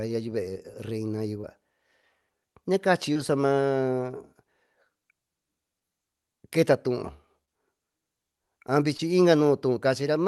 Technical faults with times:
1.41-1.45 short concealed packet loss
3.13-3.17 short concealed packet loss
5.79-5.83 short concealed packet loss
7.45-7.49 short concealed packet loss
8.97-9.01 short concealed packet loss

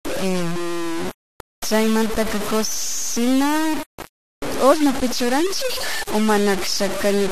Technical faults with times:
0.00-7.31 low bit depth without dither

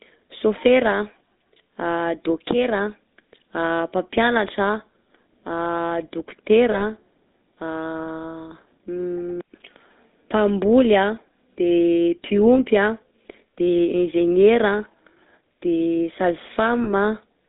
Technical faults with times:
0.00-17.48 GSM full-rate codec
6.72-6.82 lost GSM frames
16.84-16.92 lost GSM frames

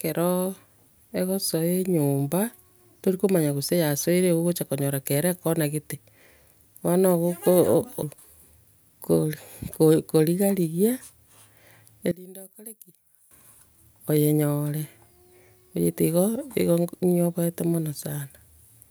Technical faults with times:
12.11-13.31 one channel inverted

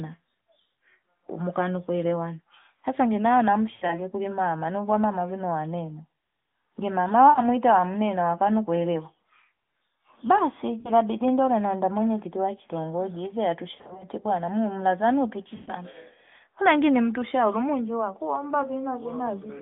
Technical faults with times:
3.74-3.98 lost AMR speech frames
7.30-7.42 lost AMR speech frames
10.80-10.91 lost AMR speech frames
13.76-14.06 lost AMR speech frames
15.56-15.72 lost AMR speech frames

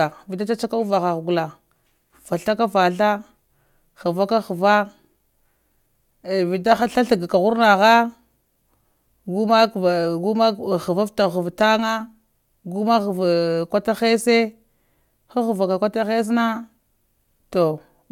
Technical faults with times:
none

